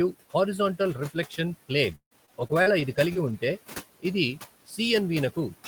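A noise suppressor runs throughout this speech recording, pulling steady background down by about 16 dB frame by frame, so the room noise, sitting about 18 dB below the voice, sinks between phrases and swells back under them. From 1.91 to 3.34 s, repeated packet loss (robotic sound) sets in: packets keep going missing, and each hole is patched by stretching the previous sound, with the longest gap about 154 ms and around 150 ms rebuilt in all, so the speech turns choppy with fragments dropped. At 4.67 to 4.79 s the suppressor mistakes part of the speech for noise and cuts it by as much as about 14 dB for roughly a tenth of a second, leaving that bit swallowed and faint.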